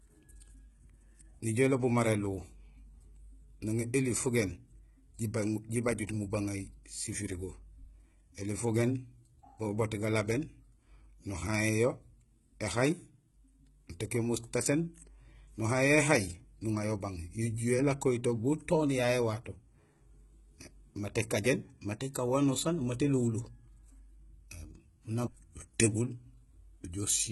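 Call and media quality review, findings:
Speech throughout: lispy, gritty sibilants, fake-sounding treble, nothing above 11.8 kHz. Likely HE-AAC compression rebuilding the top by band replication; heavy, fits about 16 kbps.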